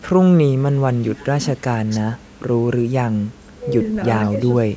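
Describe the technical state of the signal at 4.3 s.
At 4.3 s the speech is being turned down by speech suppressed in double talk, running from 4.30 to 4.35 s. The likely cause is an echo canceller that hears sound returning from the far end at the same moment and, unable to separate it from the local talker, attenuates everything. The speech dips by around 10 dB for roughly 50 ms. On a waveform this shows as a brief pinched section of lower amplitude. On a spectrogram it appears as a short vertical band where the energy fades.

Just before that, from 4.24 to 4.29 s, there is an echo leak: a very faint copy of earlier speech, delayed by 515 ms and sitting well below the direct signal. This is likely a loudspeaker-to-microphone path that the far end's canceller did not fully remove. It is heard as a faint ghost of the voice. On a spectrogram it forms a weak smear that repeats patterns from half a second earlier, beneath a spectrum that stops at 8 kHz.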